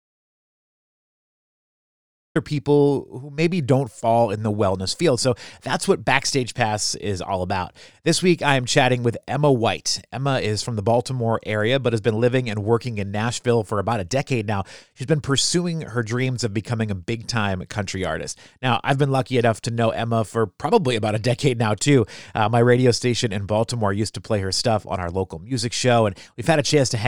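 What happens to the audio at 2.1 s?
At 2.1 s you're still inside an audio dropout to silence that runs from the very start of the clip to about 2.35 s. It's dead silence, no room tone at all, most likely a lost input or mute, and the speech then cuts in abruptly with "people who maybe don't".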